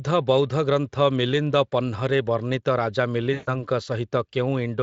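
VoIP packet loss concealed by the speech codec occurs from 3.33 to 3.5 s, just after "ବର୍ଣ୍ଣିତ ରାଜା". About 140 ms of audio went missing, which fits seven 20 ms frames lost in a row. The Speex decoder, otherwise running light at 27.8 kbps, filled the gap by repeating its last pitch and spectral shape at falling gain. The speech smears into a buzzy tone or a coloured noise that fades, then returns weak or distorted as the decoder recovers.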